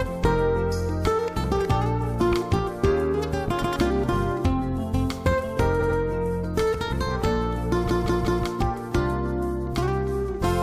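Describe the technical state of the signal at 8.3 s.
A block of compressed frames about 186 ms long was repeated, so from 7.87 to 8.43 s the decoder replays it three extra times: repeated frames, heard as a stutter, adding about 0.56 s.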